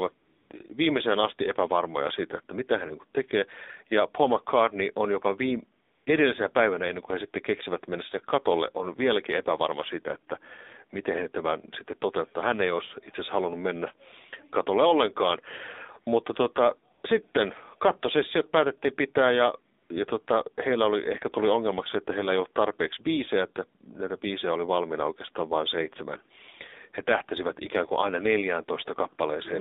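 From start to finish the speech carries the damage of the AMR narrowband mobile codec. The line passes only about 250 Hz to 3.7 kHz, so a spectrogram shows a hard ceiling just under 4 kHz with nothing above it and thin low bass. Consonants lose their air. The voice is plainly buzzy and synthetic, which fits a low mode around 7.4 kbps, where too few excitation pulses per frame drive the vocal tract model.

AMR comfort noise replaces four pauses. From 0.18 to 0.50 s, just before "viimeiseen asti epävarmoja siitä", the phone stopped sending speech frames and the receiver generated a smooth, steady hiss from a rough level and spectrum description. The same happens at 5.86 to 6.06 s, between "on jopa viime" and "edellisenä päivänä ennen kuin"; at 16.94 to 17.04 s, before "sitten kattosessiot päätettiin pitää"; and at 19.82 to 19.90 s. On a spectrogram each gap is a flat, featureless noise band that switches on and off abruptly. 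The waveform shows a low, even floor there instead of the real background.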